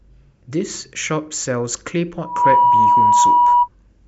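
Speech clip where, from 2.20 to 3.69 s, a single tone near 971 Hz swells over roughly a third of a second into a loud squeal, ending up about 10 dB above the speech. This is loudspeaker feedback squeal: the microphone picks up its own loudspeaker, and loop gain above one at that frequency lets it build.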